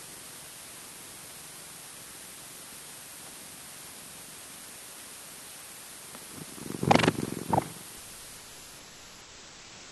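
Quantisation to a low bit depth with dither, consistent with roughly 7 bits, turns the rounding error into a constant, even hiss only about 10 dB below the audio, with no distortion. From 7.97 s to the end at 9.92 s, the sender's voice detector likely treated the sound as background and stopped transmitting, so about 1.95 s of audio is dropped and replaced by steady comfort noise. The Opus call path carries the audio with its high end limited to about 12 kHz.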